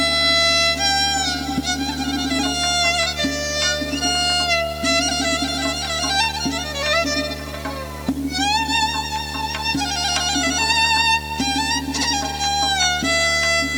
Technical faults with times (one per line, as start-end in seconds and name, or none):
0.00-13.78 video or display buzz